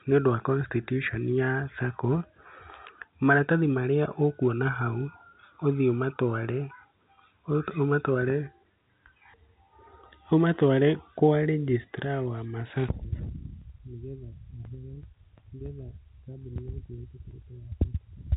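No technical faults can be heard in this speech, which comes through G.711 telephone coding with nothing above 3.9 kHz.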